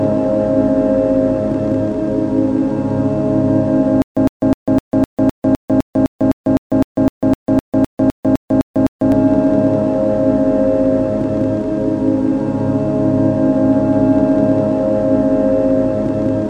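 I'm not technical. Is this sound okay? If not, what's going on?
No. From 4.02 to 9.12 s there is a stutter with silent gaps. The player most likely stalled while waiting for data, and each time it retried, it replayed the last small piece it had and then went quiet. You hear the same 108 ms fragment come back 20 times, with about 147 ms of dead silence after each, so it repeats about four times a second. Whatever should have played during those five seconds is missing.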